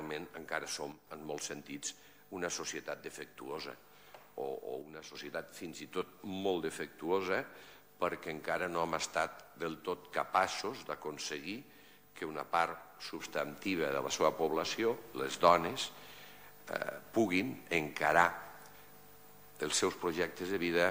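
At 0.92 to 1.07 s and 4.82 to 5.15 s the level drops about 6 dB, then from 13.2 s to the end rises about 6 dB: a sudden gain jump, likely an unramped gain change, showing as sharp steps in waveform envelope and noise floor together.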